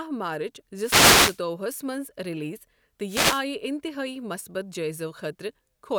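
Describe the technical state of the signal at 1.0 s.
At 1.0 s the speech is hit by a burst of static, a short rushing swish, running from 0.79 s to 1.40 s, just before "ہَس منٛز ریلیز". This is a wireless microphone noise hit: the analogue FM radio link briefly faded as reflected paths cancelled the signal at the receiver, so its own noise rose against the voice.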